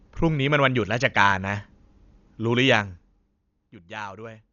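From start to finish, the speech carries the marks of Dolby Digital compression, likely the cause of what is heard. Nothing survives above 7 kHz, so the sound is dull and boxed in. The damage is heavy, which fits a bitrate around 48 kbps. At that rate many frequency lines get no detail bits. The decoder fills them with noise. That leaves a rough, fluttering grain around tonal parts.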